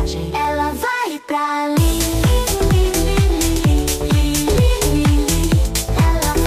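At 0.45 s there is a single sharp click. It is likely dropped samples. A fraction of a millisecond is missing, so the waveform jumps abruptly.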